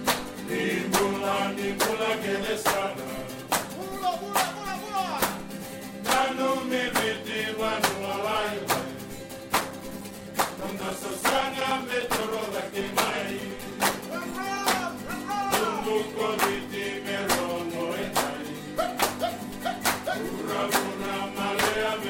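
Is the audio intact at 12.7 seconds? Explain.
No. At 12.7 seconds the clip is inside a run of periodic USB or driver dropouts lasting from about 9.6 to 14.3 s. Something stalls the USB bus or audio driver every 0.1 s, and each stall loses a few milliseconds of audio, which is replaced with silence. The result is a steady train of around fifty ticks, ten per second, audible only while sound is present and stopping once the span ends.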